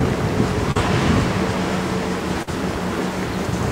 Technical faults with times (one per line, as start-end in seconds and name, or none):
0.71-0.77 short concealed packet loss
2.43-2.49 short concealed packet loss